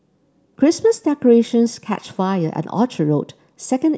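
No faults are audible anywhere in the speech.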